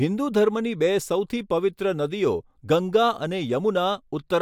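No technical faults can be heard anywhere in the recording.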